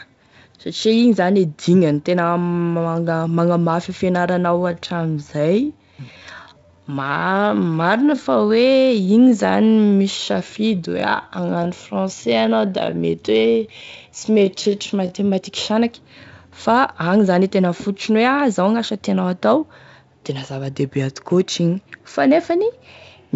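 From 4.67 s to 15.27 s, just after "e fianaranao", the speech abruptly drops to 0.68 times its pace at unchanged pitch and drags. This is likely a time-stretched section, in which short pieces were repeated to lengthen the audio.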